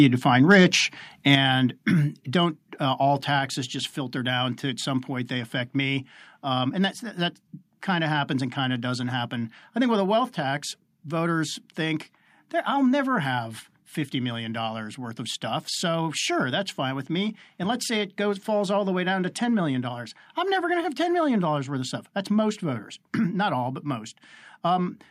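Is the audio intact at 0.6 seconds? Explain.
No. At 0.6 seconds the speech sits inside a stretch of microphone overload, from 0.5 to 0.65 s, just after "you define". The loudest peaks there are flattened at the top, driven about 2 dB past the converter's limit, with roughly 3 percent of samples cut off. That squaring of the waveform adds a harsh, crackling edge. The likely cause is an input level set too high, driving the converter past its limit.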